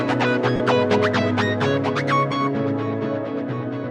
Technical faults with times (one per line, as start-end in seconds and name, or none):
0.56-0.60 lost LE Audio frames